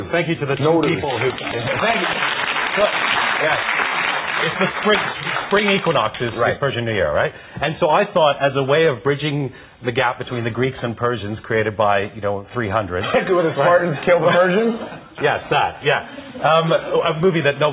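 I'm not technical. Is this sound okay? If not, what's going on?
Yes, the sound is fine: it came through a normal WebRTC call path using the G.711 mu-law phone codec, which gives it the usual telephone character with nothing above 4 kHz, and no technical faults can be heard in it.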